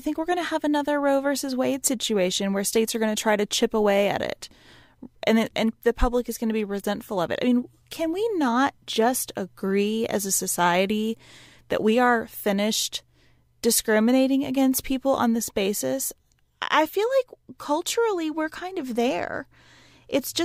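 No technical faults are audible anywhere in the speech recording.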